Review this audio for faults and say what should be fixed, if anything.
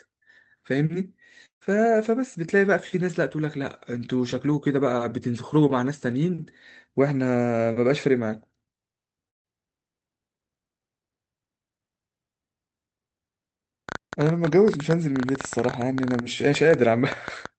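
From 1.45 to 1.63 s the speech smears into a fading buzz, then near-silence, and resumes with about 160 ms missing. This is likely a long network dropout.

From 9.29 to 9.46 s the audio drops to silence, and the speech picks up again with about 160 ms lost. This is a burst of packet loss.

From 13.89 s to the end, irregular ticks arrive about 10.6 times per second, roughly 10 dB above the speech. This is a train of clicks, likely from electrical interference or a struggling interface.

Stabilise the network link with forward error correction and redundancy, and shield or reseat the audio interface and its cabling.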